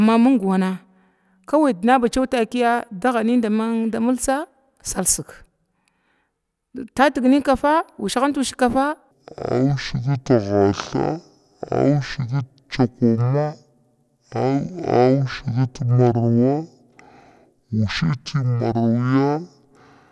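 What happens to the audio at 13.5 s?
At 13.5 s you're in the middle of a wrong sample rate stretch that runs from 9.11 s to the end at 20.11 s. Audio recorded at 48 kHz is being played at 24 kHz with no conversion, so the speech drags at half speed and drops a full octave, sounding low and sluggish.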